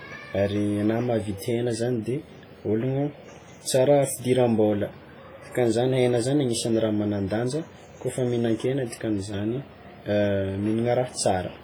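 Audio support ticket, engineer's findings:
Ringing, washy speech with hiss pumping along with the signal, whole clip. Likely WMA compression: heavy transform-codec smearing, weak detail zeroed, which fits a bitrate around 24 kbps.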